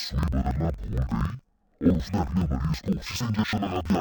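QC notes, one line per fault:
throughout, interleaved audio read as planar: speech sits an octave low, doubled and choppy at 21.5 Hz, which fits 2048-sample blocks split into halves.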